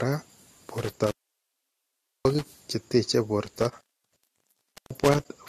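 Throughout the speech, the signal shows signs of transcoding between lossy codecs, likely an AAC encode followed by a Vorbis re-encode at a low bitrate. Each stage added its own coding damage on top of the last. Nothing comes through above 14.1 kHz, so the top end sounds dull. The two kinds of artefact overlap and are heard together.

From 0.78 to 2.48 s, an intermittent contact breaks the line. A loose connection opens and the speech drops out for about 1.14 s, with a crackle as the contact breaks and another as it closes again. Faint hiss fills the gap. The same fault returns from 3.46 to 5.26 s, where the line stays open for about 1.10 s with the same crackling edges and hiss.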